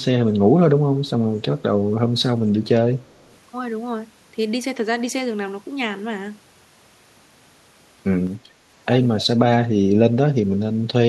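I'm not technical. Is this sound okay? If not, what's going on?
No, there is an echo leak. From 3.0 to 3.37 s, and again briefly at about 9.2 s, a faint copy of the speech comes back roughly 0.3 s late, very faint the first time and clearer the second. Unlike room echo, which blurs sound smoothly, this is a separate repeat arriving later. The likely cause is a loudspeaker on the other end whose echo canceller let its own microphone send the sound back.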